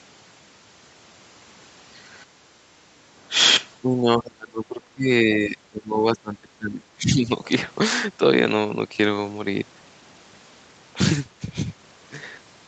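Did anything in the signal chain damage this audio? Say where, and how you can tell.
Yes, at the call-processing stage. Background gated by the echo canceller shows at 2.26 to 2.69 s: the room sound falls by about 9 dB for under half a second, then returns. On a waveform the noise floor shows a shallow notch; a spectrogram shows a brief, even darkening across the band.

Speech suppressed in double talk runs from 3.82 to 7.3 s. The speech dips in pieces, at worst by around 25 dB, for about three seconds in total. The likely cause is the canceller turning down the near talker while the far side spoke. The waveform envelope looks chopped, and the spectrogram's harmonics break into fragments.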